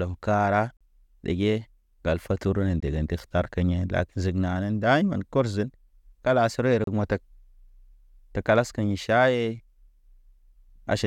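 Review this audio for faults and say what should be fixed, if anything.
Gaps between stream segments break up the speech at 0.77 to 0.81 s (38 ms), 2.80 to 2.83 s (21 ms) and 6.84 to 6.87 s (31.5 ms). Timestamps of adjacent 2-second segments don't quite meet, so the player pads the mismatch with silence. On a waveform each appears as a flat, hard-edged dropout; a spectrogram shows a clean vertical blank stripe. Segment timestamps should be made contiguous when the stream is packaged.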